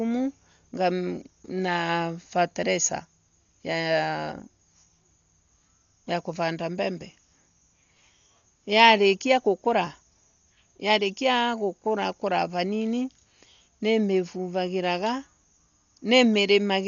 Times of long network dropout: none

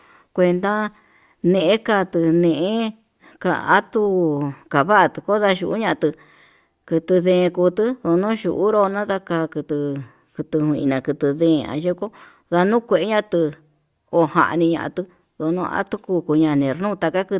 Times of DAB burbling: none

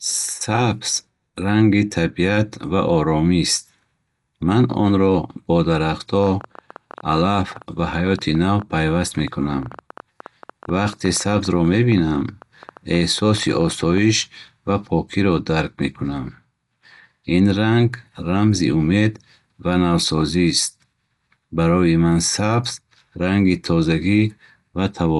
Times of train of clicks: 6.24-13.98

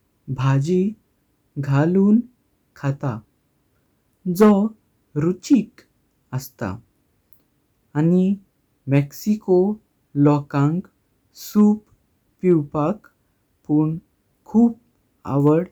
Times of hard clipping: 4.41-4.52, 5.53, 10.26, 11.59-11.62, 12.51, 15.47-15.50

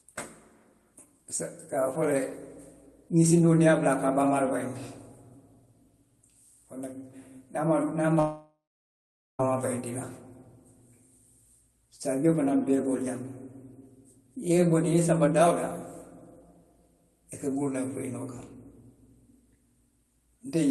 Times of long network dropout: 8.19-9.41

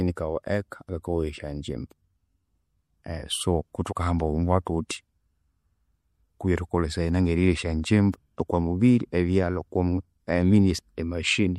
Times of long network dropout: none

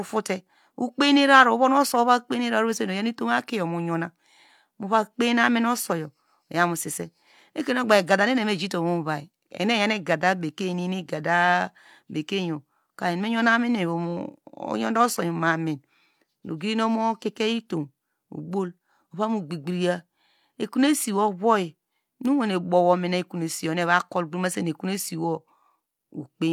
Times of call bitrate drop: none

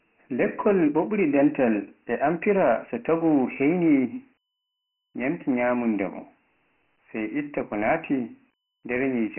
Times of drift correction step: none

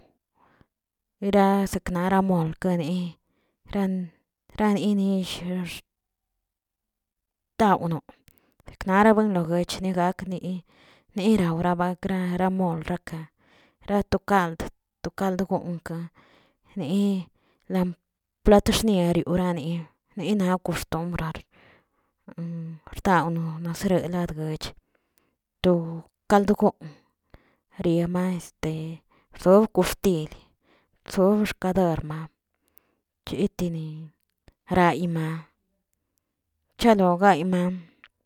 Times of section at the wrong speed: none

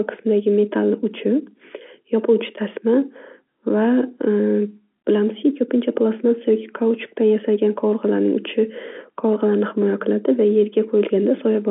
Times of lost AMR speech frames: none

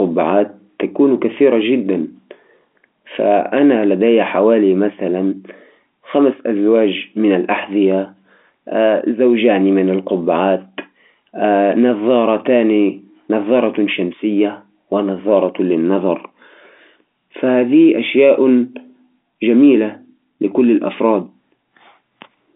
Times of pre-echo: none

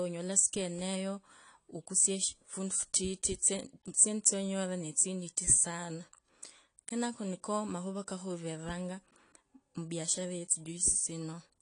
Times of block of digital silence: 7.47

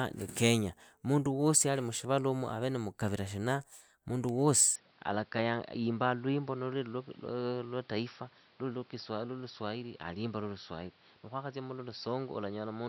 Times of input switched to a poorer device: 4.76-12.89

